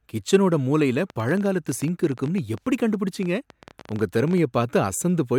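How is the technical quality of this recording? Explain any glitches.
There's a real problem here: a train of clicks runs through the speech from 1.10 s to 4.39 s. That's around forty sharp, similar-shaped ticks at roughly 13.1 per second, unevenly spaced, peaking at about the level of the speech itself, so they're clearly audible and they carry straight through the pauses too. Something is pulsing into the signal path, likely electrical interference from nearby gear or a faulty connection or power supply.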